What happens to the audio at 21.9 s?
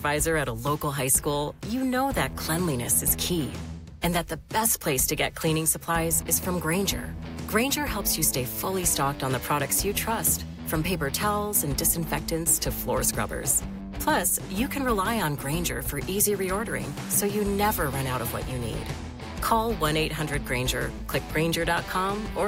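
At 21.9 s, computer activity noise is present, as it is throughout the clip: a faint buzz pulsing roughly 300 times per second, about 40 dB below the signal, appearing on a spectrogram as fine, evenly spaced vertical striations independent of the audio.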